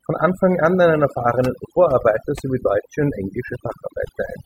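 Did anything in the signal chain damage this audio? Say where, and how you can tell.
Yes. Overdone noise removal runs through the whole speech clip, at the call-processing stage. The gaps fall to near silence with twinkling specks. The suppressor was set too hard. It drove bands near its noise estimate down, taking quiet speech detail too.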